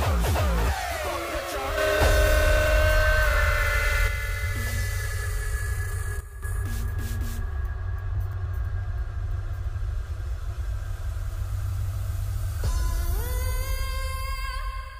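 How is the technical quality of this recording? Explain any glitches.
The recording has two sudden gain jumps. A gain setting was likely applied without a ramp: from 1.78 to 4.08 s the sound and background noise leap up by about 6 dB, and from 6.21 to 6.43 s they drop by about 10 dB.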